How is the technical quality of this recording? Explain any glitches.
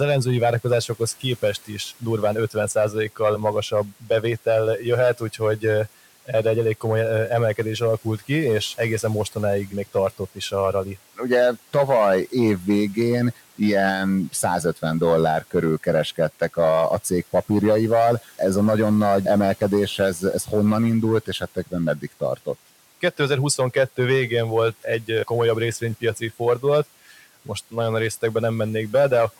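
The recording has two problems: steady clipping distortion on its louder speech and three short spots where the noise suppressor swallows part of the speech. The room noise sits about 23 dB below the voice.

Hard clipping runs through the whole clip. The speech was driven roughly 7 dB beyond what a stage in the chain could pass, so the tallest waveform peaks were sliced flat. Only a small fraction of samples are hit, but those flattened tops generate high harmonics that weren't in the original sound. The result is a gritty crackle riding on stressed syllables and louder moments rather than a constant fuzz.

Speech cut by the noise suppressor occurs at 3.91–4.1 s, 21.26–21.74 s just after "ez ez honnan indult", and 21.96–22.47 s. In each case the suppressor misjudged part of the speech as background noise and pulled it down along with the room sound, by about 10, 12 and 11 dB respectively. 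Each dip lasts only around a tenth of a second or a little more, so syllable edges or soft consonants sound clipped away or faint.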